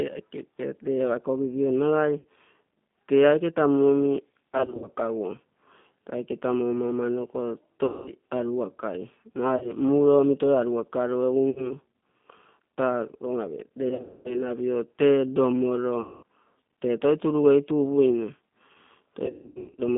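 A speech clip carried over a G.729 codec link. The band runs from about 150 Hz to 3.6 kHz, so nothing bright survives. The 8 kbit/s coding rebuilds the voice from a vocal tract filter, a pitch predictor and a few pulses per frame. The damage is plainly audible: rough and slightly synthetic. VoIP packet loss concealed by the speech codec breaks the sound eight times: 2.19–2.25 s, 4.58–4.89 s, 7.86–8.13 s, 9.57–9.72 s, 11.50–11.72 s, 13.89–14.49 s (just before "tee lomoro"), 16.01–16.23 s (between "tee lomoro" and "tee toi turugeitu upuine") and 19.26–19.81 s. Missing audio ranges from 40 ms to 420 ms per event. At 4.58 s, 13.89 s and 19.26 s the losses are scattered rather than solid. During each gap the decoder repeats its last pitch and filter at falling gain. The gap becomes a fading buzzy tone or coloured noise. The voice stays weak and smeared briefly after packets return, because each frame builds on the one before.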